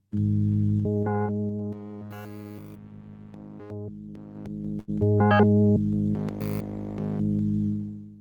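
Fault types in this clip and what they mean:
Zipper noise: the level shifts about 15 dB in unsmoothed 3 dB steps, around seven per second, each clicking audibly between 4.28 and 5.05 s.
Short stall from a late packet: at 4.79 s the jitter buffer empties, so the last sound is held for 85 ms before continuing with nothing lost.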